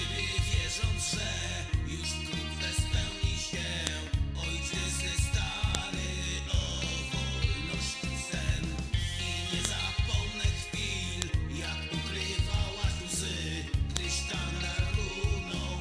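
Sharp, loud clicks snap through the sound at 3.87, 5.75, 9.65, 11.22 and 13.97 seconds. Each one is a file header played as audio. Separate WAV pieces were joined with their header bytes left in place, so those bytes play as a brief burst of samples wherever each new piece begins.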